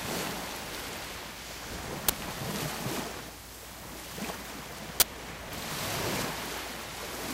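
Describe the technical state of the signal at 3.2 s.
At 3.2 s the audio is intact, with no dropout, distortion or other fault in the signal at that point.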